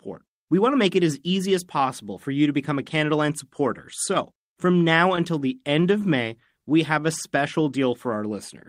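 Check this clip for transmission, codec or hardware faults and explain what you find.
Two network-side faults show up in this speech clip, both from packet delivery trouble rather than codec or hardware issues.

From 4.14 to 5.43 s there are scattered short gaps: around seven small holes where packets went missing or arrived too late. The receiver covered each one by extending the last bit of audio it had, so you get brief ticks, slight smears or little hiccups rather than silence. Each patch is short, the longest around 15 ms, and together they fill only a small share of that stretch, roughly 70 ms in all.

From 6.53 to 7.38 s there's a jitter buffer slow-down. The receiver's buffer was running thin, so it stretched the audio to build a reserve, repeating single pitch periods or bits of pause to add 48 ms. That leaves the speech running at about 95% speed with the pitch unchanged. It sounds a touch drawn out and sluggish there, maybe with a faint warble.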